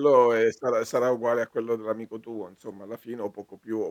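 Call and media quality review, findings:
No audible faults found in this speech recording.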